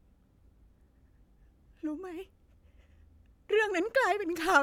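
Nothing in this speech recording points to a technical fault, as the signal holds steady and intact throughout with no audible defect at any point.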